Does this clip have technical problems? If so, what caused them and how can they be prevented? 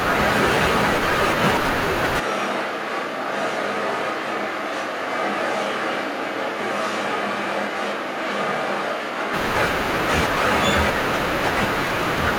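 Yes. From 2.21 s to 9.32 s the speech turns abruptly roomy and hollow, thinner in the bass and about 5 dB quieter, with background noise rising to roughly 35 dB below the speech. It snaps back just as suddenly at the end. This points to a switch to a distant microphone: the close microphone's signal likely dropped out, leaving a far-off pickup such as a camera mic. To prevent it, secure the close mic's connection and monitor its feed continuously during recording.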